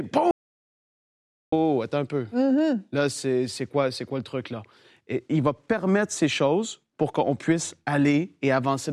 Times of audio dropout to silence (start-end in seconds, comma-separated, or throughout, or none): 0.31-1.52